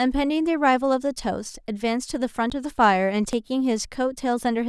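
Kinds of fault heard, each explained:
Dropped buffer (overrun): the speech jumps abruptly twice, at 2.5 s and 3.33 s, each time with no gap, as if a few milliseconds were skipped, roughly 10 ms at the first and about 20 ms at the second. The likely cause is samples being overwritten before the program read them, so the two sides are spliced together. A waveform shows a sudden step discontinuity, and a spectrogram shows a thin vertical broadband line at each point.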